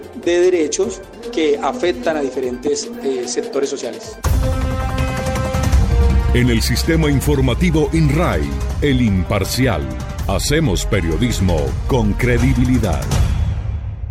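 Nothing here calls for a note, since no technical fault turns up anywhere in the audio.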